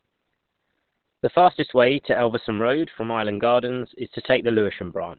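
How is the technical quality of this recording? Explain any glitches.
The quality is limited: the speech sounds dull and band-limited from start to finish, with no sudden glitches but a persistent low-bitrate character.

Low-bitrate audio saved at a high bitrate: throughout the clip, nothing is present above about 4.3 kHz, so consonants lose their crispness and the speech has a muffled texture. The likely cause is a very low-bitrate first encoding, later re-saved as a high-bitrate MP3. The larger file cannot restore the detail the first pass discarded, so its cut-off and artefacts remain.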